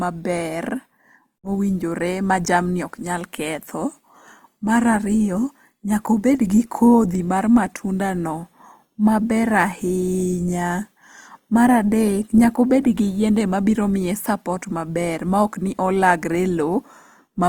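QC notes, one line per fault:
Throughout, Opus compression: speech sounds grainy and rough, with tonal parts turning noisy. This is likely the music-mode encoder refilling starved bands with folded or noise-like content, which fits about 24 kbps. The band stays full, reaching 20.2 kHz.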